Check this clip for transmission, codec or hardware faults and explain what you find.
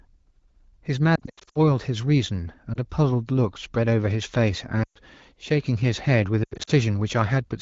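There are four spots where the speech briefly smears, warbles and drops away, from lost AMR speech frames on a wideband (HD Voice) link whose coding at 15.85 kbit/s sounds clean and only lightly coloured.

Lost AMR speech frames: at 1.15 to 1.58 s the sound breaks up repeatedly, with short stretched holes no longer than about 80 ms each. At 2.73 to 2.78 s there is a single quick dip. At 4.83 to 4.98 s the speech drops to near silence for about 120 ms. At 6.43 to 6.71 s there is another broken, stuttering patch. Each gap fits one or more 20 ms frames failing their checksum. The decoder then repeats the last good pitch and spectral shape while lowering the gain, which gives the stretched, fading quality. Speech returns weak or rough for a moment.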